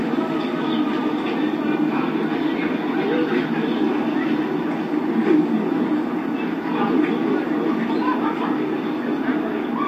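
From 0.96 s to 9.62 s, a click recurs about every 1.73 s, about seven times in all. These are clock drift buffer slips. Two clocks likely disagree by around 100 ppm. The buffer then drops or repeats a few samples at each click.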